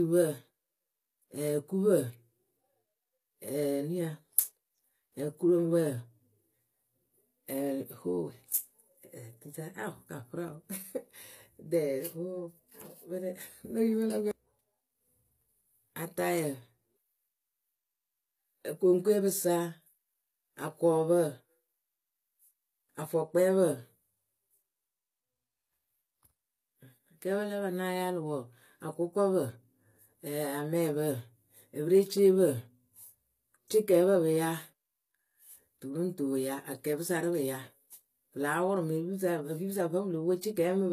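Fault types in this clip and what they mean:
HE-AAC compression: the treble sounds synthetic, s sounds turn gritty and lispy, and nothing reaches above 14.9 kHz, likely from a low-bitrate HE-AAC encode around 24 kbps.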